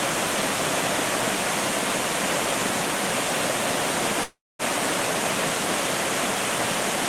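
At 4.23 s the audio breaks off in what is likely a long network dropout. For about 0.36 s nothing new arrives, and the receiver stretches the last sound into a fading buzz or hiss before roughly 230 ms of near silence. Normal sound resumes at 4.62 s, with the missing 360 ms simply gone. A waveform shows a decaying tail collapsing to a flat line, and a spectrogram shows smeared, blurred bands thinning into an empty gap.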